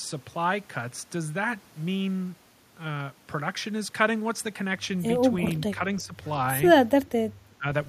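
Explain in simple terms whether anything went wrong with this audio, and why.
The speech briefly sinks twice, from 6.0 to 6.14 s and again from 7.58 to 7.66 s. This is speech suppressed in double talk: likely both sides spoke at once, and the echo canceller mistook the talker for echo and turned it down.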